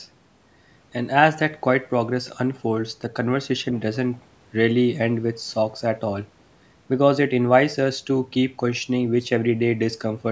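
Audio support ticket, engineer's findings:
No faults found in speech.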